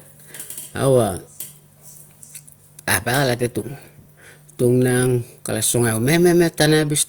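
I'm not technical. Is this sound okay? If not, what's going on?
No. Hard clipping happens briefly at 2.90 to 2.95 seconds and again at 6.61 to 6.65 seconds. For those moments the speech got louder than the recording could hold, so the tops of the sound were chopped flat, which you hear as a short, harsh crackle.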